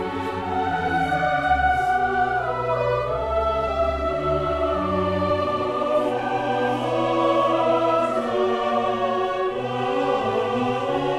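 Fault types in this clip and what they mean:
Skip ahead: At about 3.67 s the sound lurches forward. Roughly 400 ms of audio is gone. Nothing fills the hole, so both sides butt together. Later audio was already waiting, and the lost stretch was dropped in transit or by an overfull jitter buffer.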